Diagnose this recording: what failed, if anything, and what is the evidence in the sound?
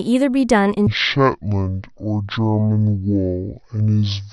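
At 0.87 s the speech abruptly drops into a deep, dragging register and stays there to the end: a section at the wrong speed, running at 0.538 times normal, with pitch sunk by about ten semitones. Because pitch and tempo fall together rather than the timing stretching at constant pitch, this is a clock fault, likely at playback or a sample-rate conversion stage, where samples written at one rate are read out at roughly half that rate.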